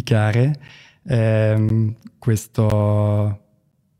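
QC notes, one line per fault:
0.68, 1.69, 2.70 and 3.72 s, gap between chunks: the speech was delivered in 1.0 s chunks with about 13 ms of silence inserted at each join, so nothing is lost but the sound stops abruptly, leaving short hard-edged holes at a steady one-second rhythm.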